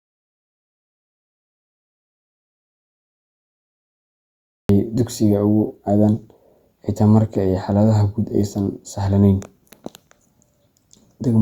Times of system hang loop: none

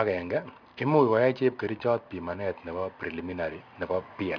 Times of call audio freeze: none

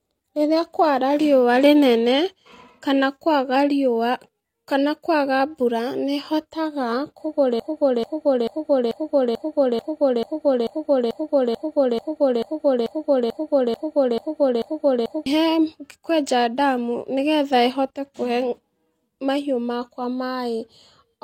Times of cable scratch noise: none

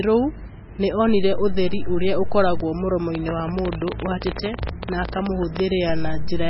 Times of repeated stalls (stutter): none

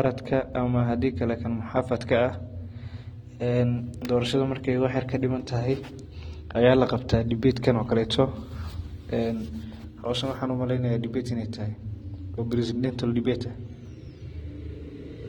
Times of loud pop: none

